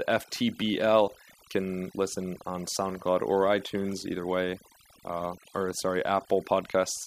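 A speech recording with overdone noise removal running the whole way through. The noise reduction was pushed too hard, so any frequency band sitting close to its noise estimate gets pulled way down or shut off completely, and the softer parts of the voice get caught in that too. You end up with a background that drops away and breaks up into little twinkling specks.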